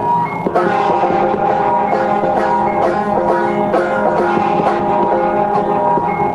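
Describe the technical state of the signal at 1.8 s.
At 1.8 s the music is inside a call bitrate drop running from 0.81 to 3.41 s. The encoder was starved of bits, a fall that fits roughly 32 down to 18 kbps and holds at its lowest for about 2 s, so the coding is coarser and the music sounds rough and degraded.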